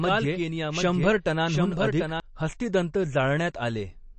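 Speech, with two faults. Across the whole clip there is plainly audible codec damage, most likely MP3 compression at a low bitrate in the region of 33 kbps. Nothing remains above 8.3 kHz, so sibilants lose their top and sound dull. The encoder's starved bit budget leaves weak frequency lines flickering on and off between frames, giving the speech a watery, swirly texture with smeared consonant attacks. From the start until 2.2 s there is a doubled audio track: a second, full-band copy of the speech trails the original by roughly 0.7 s at around 5 dB lower level. It is already running when the clip begins. The copy is dry, with no decay or room colour, which likely points to the same signal being captured twice through a slower path rather than to an acoustic echo. It cuts off abruptly at 2.2 s instead of fading out.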